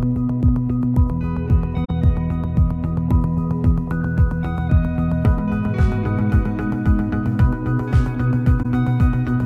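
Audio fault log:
1.84–1.90 s and 8.62–8.66 s, corrupt frame concealed: damaged bits in the coded stream were caught by the decoder, which muted or covered the bad data. The damage spans about 56 ms, roughly three frames' worth, and then about 34 ms, about one frame.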